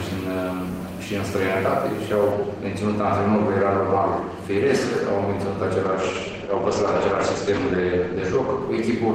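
From 5.87 s to the end the sound turns rough and muffled, losing everything above 8 kHz: a call bitrate drop, which fits a fall from 32 to 11 kbps.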